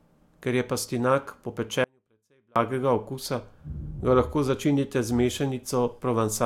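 At 1.84 s, just after "je pastinak po", an audio dropout to a faint residue abruptly cuts the speech for about 0.72 s, leaving faint sound roughly 40 dB down, likely from a broken upstream link while the later path stayed live. The waveform shows a sudden near-flat gap, and the spectrogram a dim band until 2.56 s.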